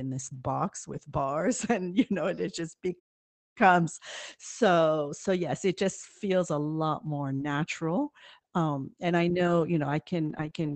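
Speech carried over an Opus call link, with nothing above about 8 kHz, shows three faults. First, a lost packet rebuilt from error correction, at 0.93 to 0.99 s, just after "this box". Two packets went missing. The packets that followed each held a low-bitrate spare copy. The decoder played those copies, so about 40 ms was rebuilt rather than dropped. There is no gap. That short stretch just sounds rougher and noisier than its surroundings.

Second, a playback stall runs from 2.99 to 3.57 s, right after "know and it just". The sound cuts out mid-flow and stays silent for about 560 ms before it resumes. The likely cause is the player running out of buffered audio, or its thread being blocked, until it could catch up.

Third, scattered short gaps run from 7.36 s to the end, starting after "feels a lot more". Packets were lost or arrived late here and there across this final stretch. Each time, the receiver filled the small hole by stretching out the last bit of sound. 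The audio stays mostly clear. But it picks up brief ticks, smears and hiccups that come and go until the clip ends.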